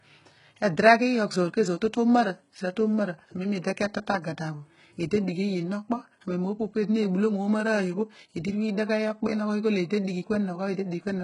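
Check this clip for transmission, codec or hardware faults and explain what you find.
One codec fault runs through the whole speech clip. Nothing is heard above about 11.1 kHz. The treble that remains sounds synthetic. It is gritty and metallic rather than natural. S sounds come out lispy. The damage is heavy. This is likely HE-AAC compression at a very low bitrate, around 12 kbps. The codec keeps only the lower spectrum. It fakes the upper bands by copying lower ones upward under a coarse envelope. Harmonics therefore fail to line up across the crossover.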